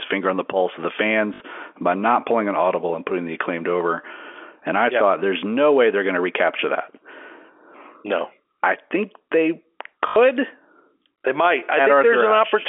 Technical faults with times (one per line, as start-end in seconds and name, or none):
1.34-1.40 packet loss with last packet repeated
10.08-10.16 packet loss with last packet repeated